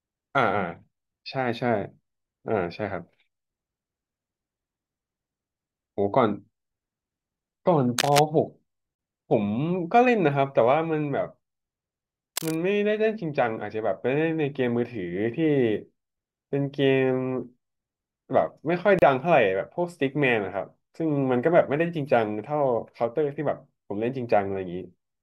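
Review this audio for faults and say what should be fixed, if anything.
Cable scratch noise appears at 7.98 to 8.19 s, nearly as loud as the speech, and again at 12.36 to 12.57 s, a little quieter. Each is a dense, ragged rustle over the speech, likely from a worn cable or connector being moved. Unlike steady hum or hiss, it comes and goes with handling. Replace or reseat the cable and keep it still while recording.

A gap at a join of encoded pieces opens at 8.95 s (37 ms) and at 18.99 s (32 ms), exactly 10 s apart. Separately encoded pieces were joined with their encoder start delay and end padding left in. The speech then resumes where it stopped, which distinguishes this from a dropout that loses audio. Trim encoder delay and padding, or join the audio before encoding.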